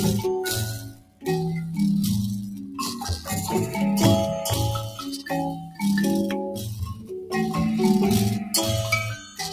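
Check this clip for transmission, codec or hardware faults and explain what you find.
The clip has one processing fault rather than a transmission or hardware one: a speech noise suppressor left running on non-speech audio, which both pumps the whole clip and sharply ducks several passages.

Noise suppressor applied to music or sounds, throughout: the suppressor misreads sustained tones and ambience as noise, so level swings by roughly 10 dB as onsets pass and held parts sink. Unlike codec pumping, the swings track steadiness of the sound, not bitrate.

Sound cut by the noise suppressor, at 0.76–1.26 s (about 16 dB down), 2.53–2.78 s (about 6 dB), 4.94–5.28 s (about 12 dB), 5.54–5.83 s (about 13 dB), 6.5–7.11 s (about 12 dB) and 9.17–9.39 s (about 10 dB): sustained or decaying material fades or is truncated while attacks survive, unlike dropouts, which silence everything abruptly.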